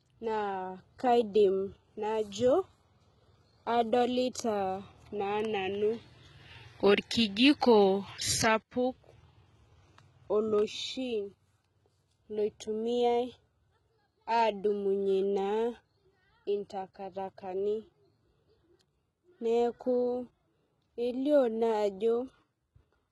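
Heavy HE-AAC compression runs through the whole speech clip. Only the lower spectrum is properly coded. The treble is likely rebuilt by spectral band replication, which fits a bitrate near 16 kbps. Its harmonics do not line up with the lower bands, so s sounds turn gritty and metallic.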